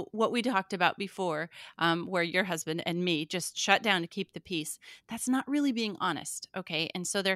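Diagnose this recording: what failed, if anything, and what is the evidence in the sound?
Nothing in this recording points to a failure at any stage of the chain. No event anywhere in the speech marks a fault.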